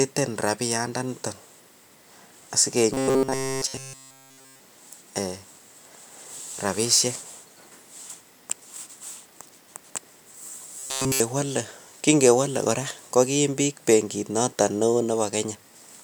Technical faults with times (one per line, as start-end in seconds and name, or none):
2.94-4.59 robotic sound from repeated short buffers
10.79-11.20 robotic sound from repeated short buffers